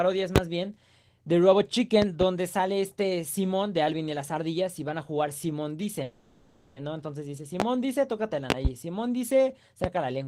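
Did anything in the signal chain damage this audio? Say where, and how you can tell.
Yes. Loud pops sit at 0.36 s, 2.02 to 2.25 s (two pops), 7.6 s, 8.50 to 8.68 s (two pops) and 9.84 s, roughly 15 to 25 dB above the signal. They point to a sudden voltage step, likely from a plug, switch, static or driver glitch, in the analogue wiring or driver stage. The sound carries on underneath, which rules out a dropout.

A call audio freeze runs from 6.03 to 6.79 s. For about 730 ms the last sound is stretched into a fading buzz or hiss instead of silence, then the audio resumes exactly where it stopped. This is likely the network starving the jitter buffer. Unlike packet loss, nothing is missing. The delay simply grows by 730 ms.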